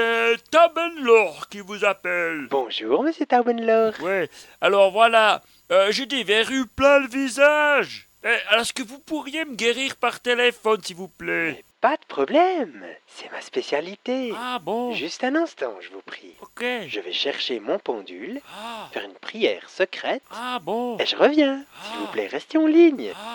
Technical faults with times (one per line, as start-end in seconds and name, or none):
none